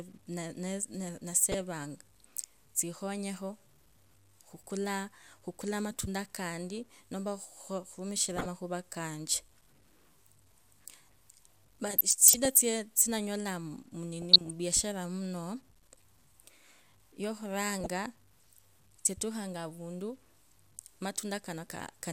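A speech recording with two faults. Throughout, a grainy distortion sits about 35 dB below the signal. It follows the speech, so quiet passages and decays turn gritty rather than hissy. The likely cause is low bit depth without dither. The sound points to about 10 bits, truncated with no noise added to break up the steps. The rounding error tracks the waveform and becomes distortion. DAB burbling appears five times: 1.43 to 1.61 s, 8.32 to 8.46 s, 11.86 to 12.63 s, 14.22 to 14.50 s, and 17.70 to 17.86 s. Each burst puts short blips of noise over the speech. Bit errors from weak reception have slipped past error correction into the MP2 data. They corrupt samples and scale factors frame by frame. The longest burst, near 12 s, fits about 32 corrupted frames in a row.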